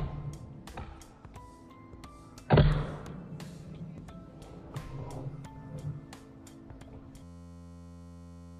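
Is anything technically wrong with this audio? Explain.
Yes. From 7.23 s to 8.59 s there is a system hang loop. The system stalled while the audio hardware kept replaying one 11.61 ms block, which fits a 512-sample buffer, over a hundred times. The result is a steady 86.1 Hz buzz, with about a second and a half of audio lost.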